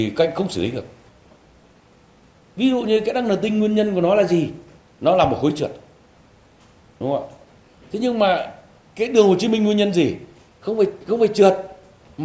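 Listening closely across the whole clip, nothing stood out as a technical problem at any point.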